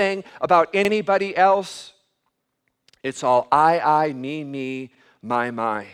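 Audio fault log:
0.85–0.90 s and 4.95–5.00 s (just after "I I me me"): overlapping chunks. The speech was handled in 2.0 s chunks, and at these two joins the next chunk begins 50 ms before the previous one ended. That 50 ms plays twice, producing a short click and stutter.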